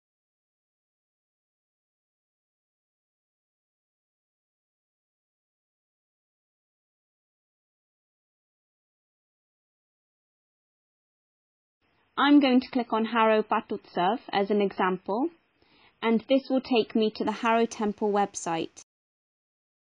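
From 11.27 to 17.27 s, an adaptive stream at a lower bitrate takes over. Nothing remains above 5.5 kHz, consistent with a roughly 16 kbit/s MP3 stream. The switch is abrupt, with no gap.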